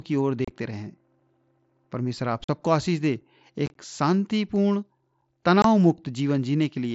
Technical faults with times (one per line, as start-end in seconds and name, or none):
0.45-0.51 unconcealed Bluetooth headset packet loss
1.20 gap between chunks
2.44-2.49 unconcealed Bluetooth headset packet loss
3.21 gap between chunks
3.66-3.75 unconcealed Bluetooth headset packet loss
5.21 gap between chunks
5.62-5.65 unconcealed Bluetooth headset packet loss